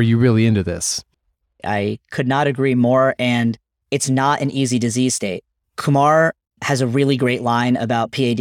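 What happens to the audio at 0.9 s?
Nothing goes wrong at 0.9 s; the speech plays through that moment intact, with no dropout, click or distortion.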